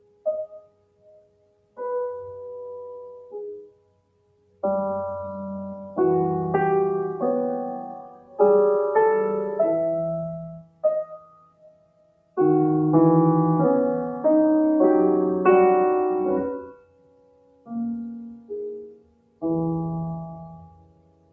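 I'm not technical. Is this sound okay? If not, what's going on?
No, not quite. A noise suppressor applied to music or sounds is at work the whole way through: a filter built for calls treats steady, lingering parts as background noise and keeps turning them down, so the sound pumps and thins while sharp hits slip through.

You can hear the sound cut by the noise suppressor most clearly at 0 to 1.8 s, 3.2 to 4.6 s, 8.0 to 8.4 s (a lighter dip), 10.5 to 12.4 s, 16.7 to 17.7 s, 18.1 to 19.4 s and 20.4 s to the end, where held sounds and fading tails sink away.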